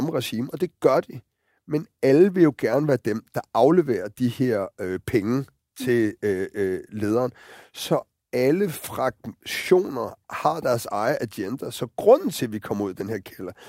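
No technical faults are audible.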